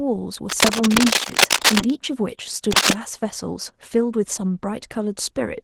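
Opus voice compression runs through the whole speech clip, and the damage is plainly audible. The coder splits the signal, using linear-prediction coding for the lower band and a transform layer for content above 8 kHz, all squeezed into a budget that fits roughly 16 kbps. The excitation is coded coarsely, so the voice turns hoarse, slightly robotic and muffled. The top band is kept.

Cable scratch noise appears from 0.49 to 1.90 s and again from 2.71 to 2.94 s, a little louder than the speech. Dense, uneven bursts of rustling and scratching sit on top of the sound in both stretches. This is likely a worn cable or connector being moved, with its contact resistance jumping rapidly. The first burst lasts well over a second, and the second is a brief flick.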